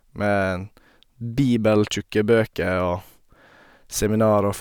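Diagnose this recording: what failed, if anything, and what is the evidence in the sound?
Nothing failed: no stage from capture through to playback leaves an audible mark on this speech recording.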